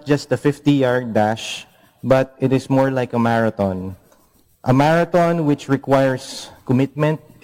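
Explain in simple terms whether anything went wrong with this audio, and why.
Nothing went wrong here.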